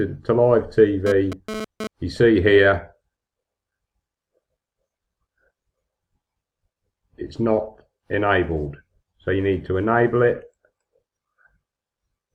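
From 1.07 to 1.87 s, a hard, raspy GSM phone buzz at 217 Hz, about 9 dB below the signal, shows data-transfer bursts rectified; unlike mains hum, it comes and goes.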